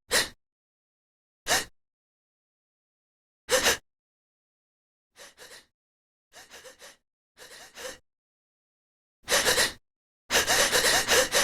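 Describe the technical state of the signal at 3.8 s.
At 3.8 s the level is being pulled down in unsmoothed steps rather than along a continuous ramp, producing zipper noise from 3.72 to 4.09 s. The gain drops about 3 dB at a time, around twenty times a second, for a total fall of roughly 25 dB. Each abrupt jump puts a small discontinuity into the waveform, so a rapid ticking, zipping texture rides on the sound while it fades.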